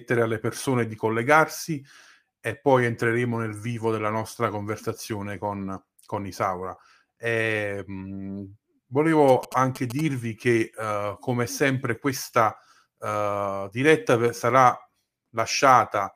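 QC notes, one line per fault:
9.28–10.01 s, GSM signalling bursts: a galloping dit-dit-dit of short buzzes, roughly 15 dB below the speech, ending just before "che uh come sempre". A nearby 2G phone's radio bursts are rectified into the audio at about 217 Hz. Unlike steady mains hum, it arrives in gated clusters.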